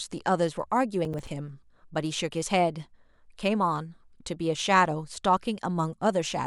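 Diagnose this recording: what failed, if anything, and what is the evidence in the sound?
Processor overload crackle at the driver or buffer stage, from 1.05 to 1.27 s: a short gritty burst of crackle over the speech. The processor missed a handful of buffer deadlines, each apparently around 5 ms, and each miss dropped in a hard-edged silent gap.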